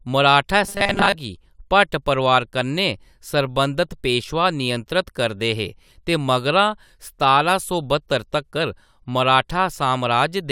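From 0.64 to 1.16 s, the speech turns into a robotic sound from repeated short buffers. The voice becomes a rigid, metallic buzz fixed at 200 Hz. It still tracks the speech loosely. The likely cause is audio arriving too slowly, so the playback repeats a tiny slice over and over. A 200 Hz buzz points to slices about 5 ms long. Most of that stretch is repeated material. Normal sound returns before "गी भट परोआर".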